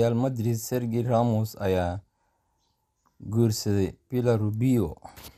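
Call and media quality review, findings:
Dull, gurgling, granular speech throughout; nothing above 15.1 kHz, upper bands flickering. Likely MP2 compression at a rate that fits roughly 80 kbps, starving the 32 sub-bands of bits, so upper bands are switched off and the rest coarsely quantised.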